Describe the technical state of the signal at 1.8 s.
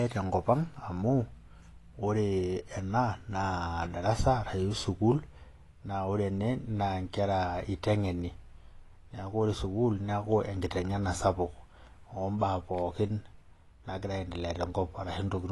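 At 1.8 s the speech carries the same AAC compression damage heard from start to finish. The spectrum stops abruptly at 11.5 kHz, so sibilants sound dull and clipped at the top, and the upper bands have a smeared, plainly fizzy texture. The likely cause is a perceptual codec such as AAC-LC, which quantises each frame's frequency lines coarsely and discards the highest bands. The degree of damage fits a bitrate around 32 kbps.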